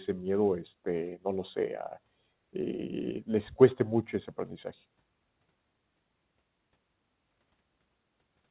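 No technical faults turn up anywhere in the speech, which has come over a call path whose narrow band, with nothing above 4 kHz, fits the G.711 mu-law telephone codec.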